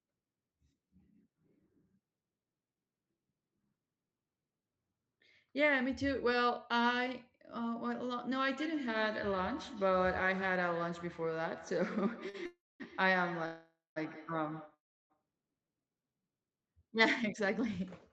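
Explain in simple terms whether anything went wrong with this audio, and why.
Several things went wrong, mostly in the second half of the clip.

From 8.57 to 15.23 s there is feedback echo between two devices. Another device's microphone caught the sound again, so it repeats faintly about every 150 ms.

At 12.29 to 12.36 s there is a short stall from a late packet. A piece of audio arrived late, so the last sound was stretched for 45 ms. Nothing was lost.

There are three call audio freezes, at 12.46 to 12.82 s, 13.46 to 13.98 s and 14.74 to 15.12 s. The sound stops and goes quiet, then resumes where it left off. The likely cause is delayed data.

From 17.23 to 17.80 s there is a jitter buffer speed-up. The speech runs 6% faster at the same pitch as the system trims tiny slices to catch up.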